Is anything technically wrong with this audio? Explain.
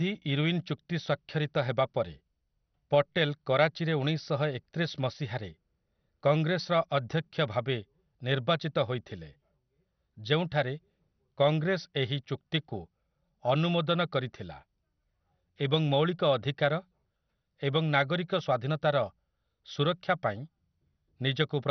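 Yes, the speech carries heavy compression damage from start to finish, most likely MP2 compression. Nothing gets through above about 6.1 kHz, so it sounds dull. The coder splits the signal into sub-bands and hands out bits; starved at what sounds like a rate near 48 kbps, it shuts off the upper bands and quantises the rest coarsely. That leaves a gurgling, granular roughness on the voice, with bands flickering in and out.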